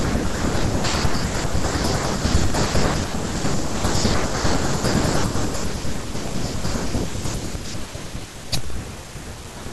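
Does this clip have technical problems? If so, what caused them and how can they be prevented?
Yes: periodic USB or driver dropouts from 1.99 s to 9.66 s, with roughly a millisecond of silence every 64 ms, ticking regularly under the speech. Preventing them means removing the background task that stalls the USB bus or audio driver, or enlarging the buffer.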